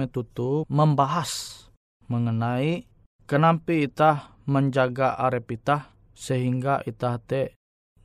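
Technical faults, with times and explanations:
No technical faults are audible in this speech recording.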